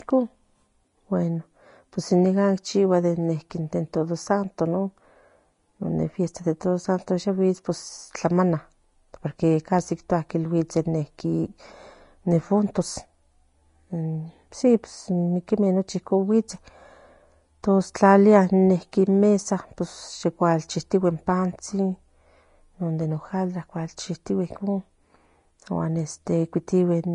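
From start to finish the speech sounds hissy and grainy, with roughened vowel tones and softened consonant attacks, and nothing is present above 10.6 kHz. The likely cause is Vorbis compression at low quality, consistent with a bitrate near 31 kbps: the treble is quantised so coarsely that fine detail turns into noise-like texture. A spectrogram would show a hard ceiling at 10.6 kHz and speckled, smeared upper bands, while the waveform shows blunted transients.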